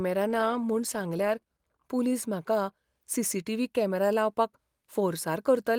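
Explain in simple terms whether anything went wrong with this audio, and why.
From about 0.31 to 1.93 seconds, there is a call bitrate drop. The call's connection judged it had less room, so the audio encoder was told to squeeze the speech into far fewer bits. With less data to work with, it describes the sound more crudely and trims away the crisp upper detail. For roughly a second within that stretch, the speech sounds rougher and more muffled, then clears as the bitrate recovers.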